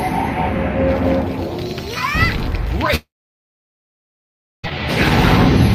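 From 2.95 to 4.66 s, a likely long network dropout loses 1.68 s: a brief fading buzz, then 1.57 s of flat waveform and empty spectrogram.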